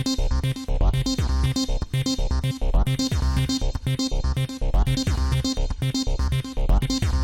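At 2.50 to 2.52 s, 4.96 s and 6.82 s, whole compressed frames were skipped, either missing from the stream or rejected by the decoder as damaged. The frames are 23.2 ms long, so the audio lurches forward by about three frames at the first point, roughly 70 ms, and by about two, roughly 50 ms, at the others.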